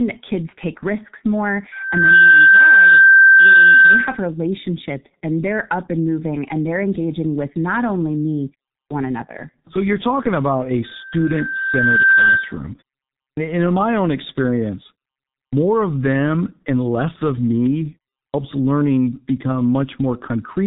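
A speech recording, muffled and hoarse throughout, with nothing above 4 kHz and smeared consonants. This is heavy G.723.1 codec damage: its 30 ms frames at 6.3 kbit/s model the voice coarsely and update slowly. Four times the speech after a pause bursts in already underway, missing about 115 to 135 ms of its onset: at 8.79 s, at 13.24 s before "in my own experience", at 15.39 s before "of them and less", and at 18.21 s before "learning become". This clipped start after a pause happens because the output device sleeps during gaps of about 0.3 to 0.5 s and needs time to wake.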